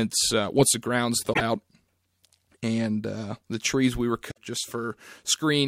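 A short glitch cuts in at 1.29 to 1.41 s, right after "uh once the ground's", and a second one at 4.27 to 4.38 s, after "the trees we were", each lasting about a tenth of a second. Both are damaged data in a compressed stream: corrupted bytes in the encoded speech left the decoder unable to read those frames, so it lost sync and searched for the next valid frame header.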